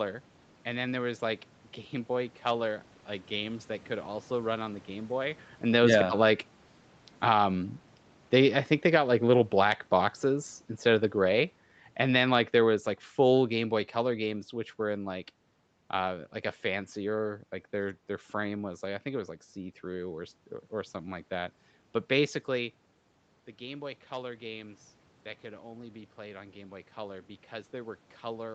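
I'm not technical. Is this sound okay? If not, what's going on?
No. From 5.6 to 17.2 seconds the voice starts loud and slowly sinks, the background sinking with it, until just before "like their their frame". This is automatic gain falling: the call's level control judged the input too loud, or its background noise too strong, and gradually turned it down.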